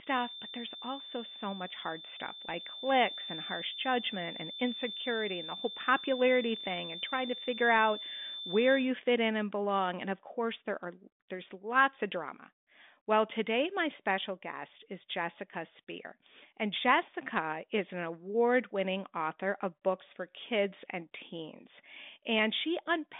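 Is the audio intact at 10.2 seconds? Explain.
Yes, at 10.2 seconds the audio is intact, with nothing beyond the narrow telephone band of the G.726 ADPCM link, which carries nothing above about 3.8 kHz.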